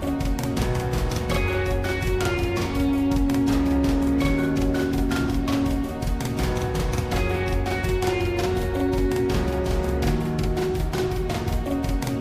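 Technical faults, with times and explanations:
throughout, channel delay (doubling): every sound has an equal-level slap copy 46.4 ms later, because one channel arrived late, which fits a 2048-sample buffer, before mono summing.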